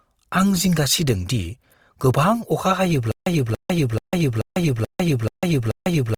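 From the start the speech has a grainy, audibly rough texture that stays with it the whole way, which sounds like Opus compression, likely in its music mode at around 24 kbps. Band energy is kept but detail is filled in coarsely, so tones turn noisy, although the full bandwidth up to about 20.4 kHz survives.

At 3.12 s, right after "गोबां अखा", a stutter with silent gaps kicks in. A 0.28 s fragment repeats seven times, with 0.15 s of dead silence between repeats, so a burst comes every 0.43 s until the clip ends. It sounds like a stalled stream is replaying its last fragment, and the audio that should have followed is lost.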